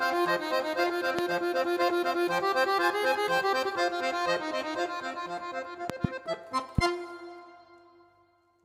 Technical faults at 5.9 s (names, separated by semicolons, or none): loud pop